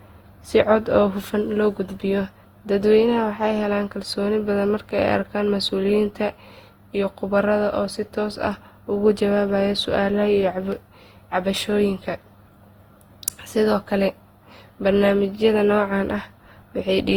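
Speech with generation loss throughout: smeared, swirly, hollow, with blurred attacks, worse than one encode at around 48 kbit/s would give, likely from about seven repeated Opus passes.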